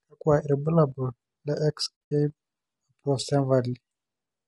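Speech clip, and the whole thing has that rough, grainy texture, with noise creeping in between the harmonics and a top end that sounds thin and a bit synthetic. That's plainly audible low-delay AAC compression, likely AAC-ELD at a bitrate that fits something around 32 kbps. Around 2.06 to 2.12 s there's AAC frame loss with muting. The sound fades out into a cluster of soft-edged holes and back in, which is what you get when the decoder zeroes the missing frames and the overlapping windows smooth the edges.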